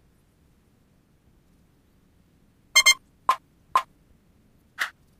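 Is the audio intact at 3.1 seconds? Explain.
Yes, the audio is intact at 3.1 seconds, with no dropout, click, distortion or other fault at that moment.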